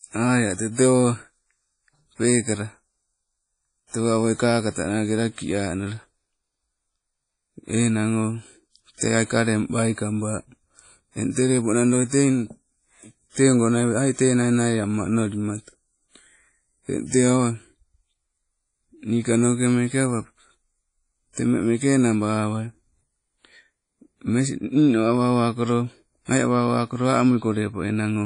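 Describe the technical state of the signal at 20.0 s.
At 20.0 s you're hearing the same problem that runs through the whole clip: low-bitrate audio saved at a high bitrate. Nothing comes through above about 10.1 kHz, and the speech keeps the artefacts of a heavy first encode, which points to something like a 32 kbit/s WMA pass. The likely cause is a later re-encode to a roomy MP3 bitrate, perhaps 192 kbit/s, which can't restore the high end the first encode threw away.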